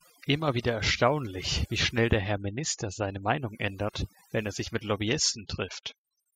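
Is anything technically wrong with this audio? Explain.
Yes. Throughout the speech, overdone noise removal: a noise reduction set too strong drops bands near its noise estimate, leaving near-silent twinkling gaps and a background broken into warbling specks.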